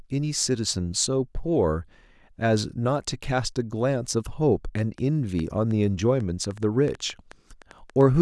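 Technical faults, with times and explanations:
4.79 to 8.02 s, train of clicks: around fifteen sharp, similar-shaped ticks arrive at roughly five per second but unevenly spaced, riding over the speech and standing out in the pauses, with peaks about 5 dB above the speech itself. The cause is likely interference or a faulty connection or power supply injecting repeated pulses. Unlike a single click or random crackle, these ticks keep the same shape and continue steadily for over three seconds.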